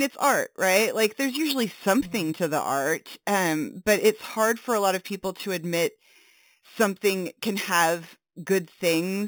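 Speech carrying imaging from sample-and-hold upsampling throughout, which fits 8 kHz audio raised to 48 kHz: a metallic fizz at about -13 dB, mirrored into 4–8 kHz, visible as flipped spectrogram copies and waveform staircase steps.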